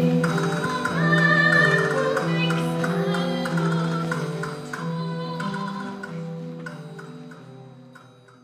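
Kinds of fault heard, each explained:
Loud pop: One sharp pop lands at about 4.05 to 4.08 s and rises a little above the level of the sound, which continues underneath. A brief voltage pulse entered the signal path, likely from a plug, switch, static discharge or driver glitch.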